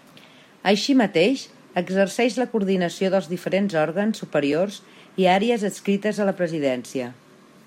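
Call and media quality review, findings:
Block of digital silence at 4.52 s in speech. Audible as a single tick: roughly 2.9 ms hard dropout to silence, no fade. Length fits one 128-sample buffer not filled in time. Probable component: audio output callback.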